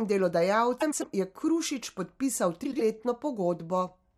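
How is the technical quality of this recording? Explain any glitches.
Two brief glitches, both frames out of order. At 0.80–1.04 s and 2.63–2.81 s, adjacent blocks of about 105 and 78 ms got swapped, giving a garbled flutter, but no lost time.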